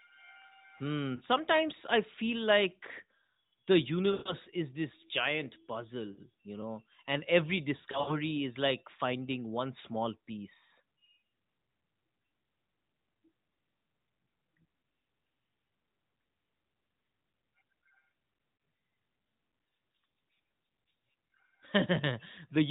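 Lost AMR speech frames cause dips at 1.16 s (before "sometimes I"), 4.12 s (140 ms, before "is this giant"), 6.12 s (after it), 7.92 s (scattered over 160 ms), 18.58 s and 20.84 s. The decoder repeats the last good frame with falling gain. On a spectrogram, harmonics freeze, then fade.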